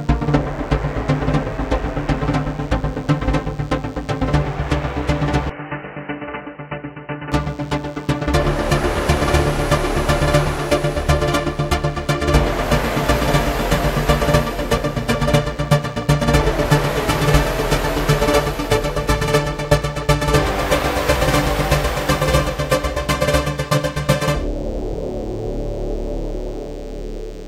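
A thin, steady buzz runs under the whole recording, pitched at 100 Hz and rich in harmonics, sitting faint and well below the main sound. This is DECT cordless phone buzz: a nearby handset or base station transmits a burst every 10 ms, and the audio circuitry rectifies that radio pulse train into audible sound.

From 5.50 s to 7.32 s the sound abruptly turns dull and boxy, with nothing above 3 kHz, drops to roughly 10 dB quieter, and picks up a faint background noise of its own. There is no gap at either transition. The likely cause is the input switched to a poorer device, a narrower-band microphone or headset call profile, before switching back.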